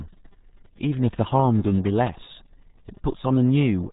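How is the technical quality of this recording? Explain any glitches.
The technical quality is poor throughout, because the whole speech recording has passed through a very low-rate codec.

RealAudio 14.4 codec, present from start to finish: the sound is consistent with RealAudio 1, a dial-up-era speech coder, and its thinness points to a rate of about 8 kbit/s. At that rate the encoder keeps only a rough model of the voice. Everything above 3.8 kHz is gone, so consonants lose their edge, and the heavy coding damage leaves the speech muffled and gargly.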